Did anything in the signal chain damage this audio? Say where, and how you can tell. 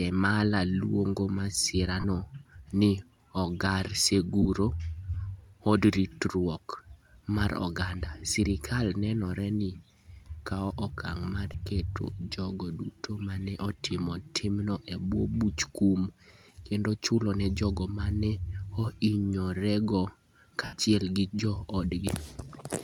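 Yes, lost LE Audio frames on the Bluetooth link, with the damage surfacing in the LC3 decoder's concealment. Gaps appear at 2.00–2.04 s, 4.42–4.46 s, 11.53 s (between "kawo okang ' mar" and "keto jogo duto ma") and 20.64–20.73 s, lasting about 37.5, 30, 15 and 82.5 ms, which fits 7.5 ms frames. The decoder repeats the last spectrum with scrambled phase, so harmonic stripes on a spectrogram blur into grey noise. The 20.64 s gap's waveform visibly tapers as concealment fades. The light lossy compression is not a fault.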